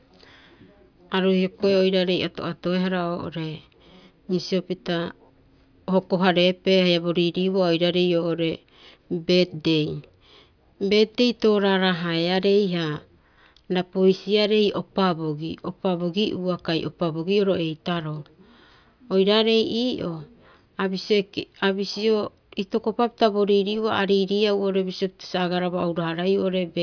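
Nothing in this speech recording stood out as a technical fault on listening.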